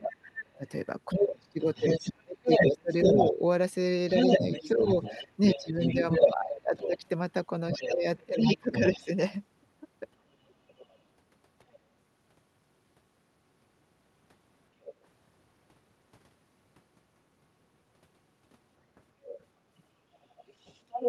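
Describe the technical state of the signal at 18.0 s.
At 18.0 s the speech is intact, with no fault present, only the band limit near 12 kHz that comes with its pass through the WebRTC call path.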